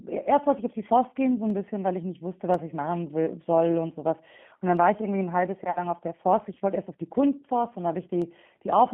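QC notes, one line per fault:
Throughout: G.729 codec, speech squeezed into a 150 Hz to 3.4 kHz line band at 8 kbit/s, sounding rough and synthetic; the spectrogram is empty above 3.4 kHz.
1.50, 2.54, 4.77, 8.22 s: dropped samples, sharp single clicks, likely from a fraction of a millisecond of missing audio, each a thin vertical line on the spectrogram and a step in the waveform.
5.71 to 5.79 s: VoIP packet loss concealed by the speech codec. About 40 ms is missing, consistent with two lost packets. The decoder extrapolates from its last pitch and filter with falling gain, so the sound fades out.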